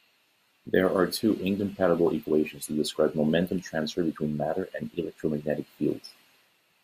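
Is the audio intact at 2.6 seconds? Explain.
Yes, the audio is intact at 2.6 seconds, with no audible fault at that moment.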